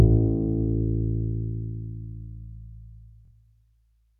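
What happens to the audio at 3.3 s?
At about 3.25 s you get a quick Bluetooth stutter, running to about 3.31 s. Data stopped arriving on time, so the receiver kept replaying the last chunk it had until fresh audio showed up. That gives a brief, buzzy, machine-gun repeat. Roughly 46 ms of sound goes missing, which fits a couple of dropped packets, and the sound picks up again slightly further along.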